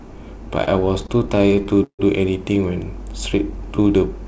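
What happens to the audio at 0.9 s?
At 0.9 s the audio is inside a stretch of repeated stalls (stutter) running from about 0.64 to 2.01 s. Packets kept arriving late, so the jitter buffer ran dry again and again, and the receiver stretched the last sound to fill each wait. Across 22 short gaps, the longest 151 ms, about 392 ms is filled this way, roughly 29% of that span. Nothing is lost, but the sound drags and stutters, fading during the longer holds.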